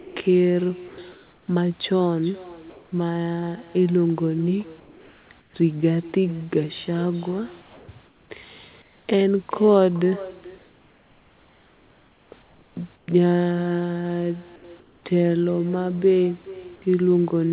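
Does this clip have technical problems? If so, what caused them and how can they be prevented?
Yes. There's echo with no canceller throughout: every bit of speech comes back around 0.4 s later as a thin copy about 20 dB down, because the far end's loudspeaker feeds its microphone. Turn on echo cancellation there, or have that person use a headset.

From 0 to 1.48 s the sound is chopped by the voice detector. Syllable edges drop out into synthetic hiss, likely because the sender's detector kept toggling transmission on and off. Make the detector less aggressive with longer hangover, or turn off discontinuous transmission.

Comfort noise replaces the background at 2.7–2.92, 4.8–5.54, 7.62–9.08, 10.58–13.08 and 14.56–15.04 s. The real room hiss turns flat and featureless, likely from the sender stopping transmission in pauses. Disabling discontinuous transmission keeps the genuine background.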